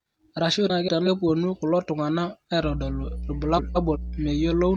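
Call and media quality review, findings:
Frames out of order, 0.70–1.08 s and 3.57–3.97 s. Speech garbles into a brief flutter. Jitter buffer or depacketiser: two neighbouring runs of frames, which fits four frames each, decoded in swapped order. Unlike packet loss, no gap or concealment smear, and no time lost.

Mains hum, 2.61 s to end. Steady 60 Hz tone, about 10 dB below speech, starting mid-call. Likely ground loop or transformer coupling in the capture chain. Distinct from buzz: smooth, sparse low harmonics, constant regardless of speech.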